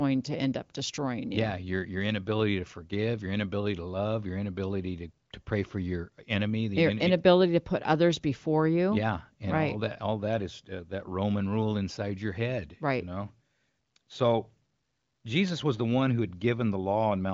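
No technical faults can be heard in this recording.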